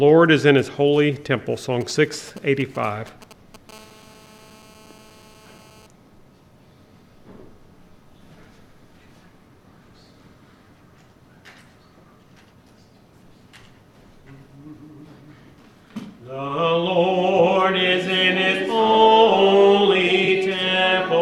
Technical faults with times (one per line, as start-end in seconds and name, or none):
1.81-3.71 GSM signalling bursts
3.72-5.87 GSM phone buzz
20.25-20.28 corrupt frame concealed